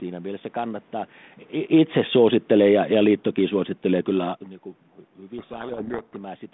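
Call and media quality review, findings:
Automatic gain falling, 1.59 to 4.43 s: level sinks gradually by about 6 dB, with the room background dropping along with the speech. Probable component is the AGC, which judged the input too loud or its background too strong and pulled its gain down. The level shifts near 1.5 and 4.5 s sound like the talker moving, not this fault.

Codec payload misread, 5.38 to 6.17 s: speech buried under harsh, rasping distortion. Probable component is the G.726 decoder, where mismatched bit order in the code words puts the difference values in the wrong places. The band fits 32 kbit/s ADPCM.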